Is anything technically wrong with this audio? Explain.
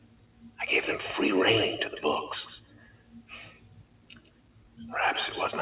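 Yes. A noise suppressor made for speech was left running on this audio, and it's working against the material the whole way through. It treats steady tones, ambience and decay as noise, so level swings by something like 20 dB. Held parts sink and tails get cut while attacks punch through, giving a pumping, uneven feel.

It also clamps down hard on specific stretches, which is sound cut by the noise suppressor. It happens from 0.00 to 0.59 s and again from 2.61 to 4.80 s, with drops of about 16 dB at the deepest. The suppressor judged those sustained or fading passages to be noise, so they dip and lose their decay. That's roughly half a second and then about two seconds of pulled-down sound. The call-path coding behind it, G.711 A-law, is doing its normal job, and you can hear its ceiling, with nothing above 4 kHz.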